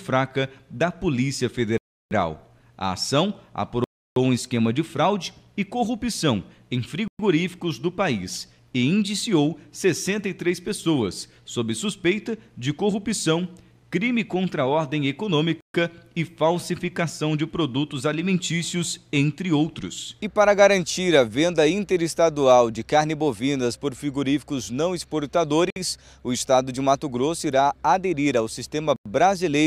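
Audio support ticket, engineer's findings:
Six hard dropouts to silence, audio resuming where it stopped: 1.78 s (0.33 s), 3.84 s (0.32 s), 7.08 s (0.11 s), 15.61 s (0.14 s), 25.70 s (0.06 s), 28.96 s (0.09 s). Likely Bluetooth stall, with interference delaying packets and the headphone buffer running dry until retransmissions land.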